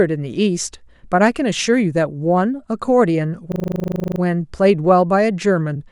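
From 3.52 to 4.2 s the speech locks into a system hang loop. The driver stalled while the hardware replayed one 40 ms slice of its buffer 17 times, giving a rough 25 Hz buzz. Unlike a dropout, nothing falls silent; the identical fragment simply repeats.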